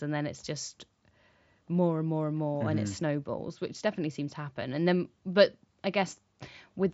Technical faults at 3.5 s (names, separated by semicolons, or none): none